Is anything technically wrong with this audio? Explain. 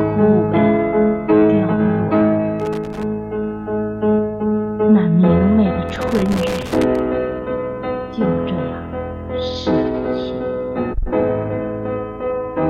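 Yes, there's loose connector crackle from 2.60 to 3.03 s and again from 5.89 to 6.99 s: a worn contact making and breaking, chopping the sound into irregular scratchy pops.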